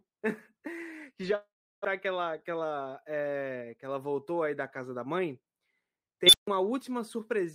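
From 1.35 to 1.86 s, just after "e já", the speech gives way to a fading buzz and then about 340 ms of silence before resuming at "que ela que". This is likely a long network dropout: roughly 400 ms never arrived, the receiver filled the gap, and the stream came back later by around 70 ms.

Between 2.50 and 3.11 s, following "que ela que", the speech sounds rushed, running about 109% of normal speed with unchanged pitch. This is a jitter buffer speed-up. The receiver held excess audio after the gap and shed around 70 ms by cutting out many tiny pitch-period slices to shrink the delay.

From 6.27 to 6.47 s a piercing tone near 4 kHz swells to a very loud squeal within about 64 ms, then drops to roughly 145 ms of silence. This is an unstable filter. A recursive filter given bad coefficients let its output grow without bound until it clipped and overflowed, muting the sound until the filter reset.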